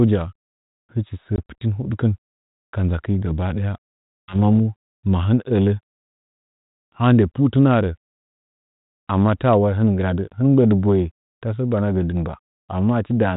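At 1.36 to 1.38 s the speech drops into a brief hard-edged silence of about 20 ms, and at 4.24 to 4.36 s a longer gap of about 60 ms follows. Each time the speech comes back slightly distorted before settling. This is packet loss on an ADPCM call, fitting roughly one and then three lost packets. The missing audio was filled with silence, so the decoder's adaptive predictor and step size drifted from the sender's on this G.726 stream, whose light coding noise suggests 32 kbit/s.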